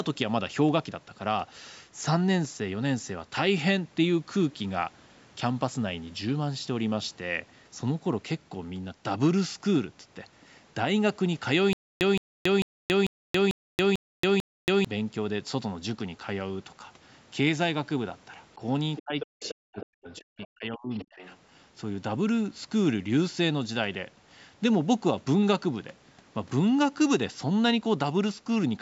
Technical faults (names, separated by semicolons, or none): stutter with silent gaps; speech suppressed in double talk; other side's voice leaking through